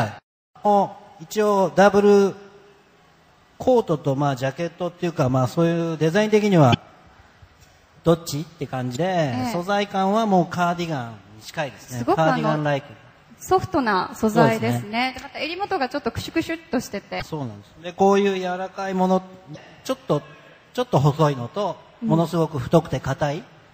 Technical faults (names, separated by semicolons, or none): MP3 compression; damaged data in a compressed stream